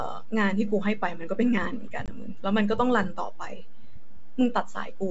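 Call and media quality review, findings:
DC offset, throughout the clip. Constant shift of the waveform off zero; inaudible itself, but eats headroom and leaves steady energy at the spectrum's floor. Check capture path.

Packet loss on an ADPCM call, 2.06 to 2.09 s. Roughly 20 ms gap, about one packet, filled with silence; G.722 decoder predictor and step size desync, so the speech re-enters slightly distorted before settling.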